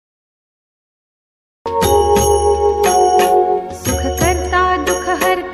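The capture began late, leaving digital silence until 1.66 s, where the audio starts abruptly mid-sound with no natural attack: a cut-off start.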